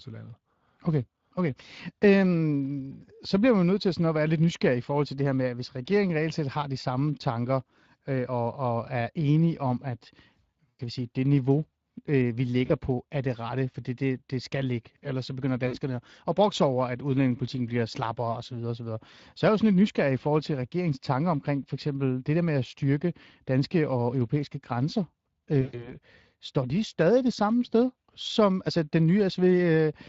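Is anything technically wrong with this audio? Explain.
Yes. Throughout, the speech carries Speex codec damage: a plainly audible hoarse, noisy texture, because this CELP coder has too few bits to rebuild the excitation cleanly. The grain, consistent with a rate near 20 kbps, stays steady rather than swirling like transform-codec artefacts.

There is also VoIP packet loss concealed by the speech codec at 10.70–10.81 s (before "vi sige det niveau"), 12.65–12.72 s, 15.67–15.76 s (between "så begynder" and "at brokse over at") and 25.61–25.95 s (after "danske og europæiske grænser", before "står de stadig det"). The decoder stretches its last pitch and filter into a buzzy tone or coloured noise that fades. This fits roughly 40 to 120 ms of lost audio per event, and the sound stays weak briefly afterward rather than simply dropping to silence.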